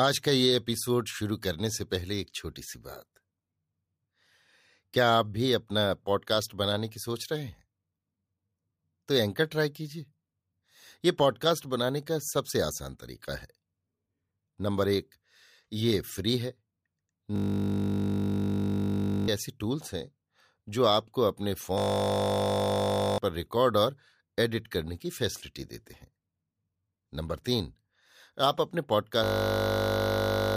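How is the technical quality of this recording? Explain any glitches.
The technical quality is compromised by three system hang loops in the speech, at 17.36 to 19.28 s, 21.78 to 23.18 s and 29.24 to 30.56 s. Each time, playback stalled while the audio hardware kept replaying the same 20 ms slice of its ring buffer, so that sliver repeats exactly at 50 Hz. Because the loop is so short, it comes across as a steady, pitched buzz rather than a stutter. The speech that should have played is gone, roughly two seconds the first time and about one and a half seconds in each of the others.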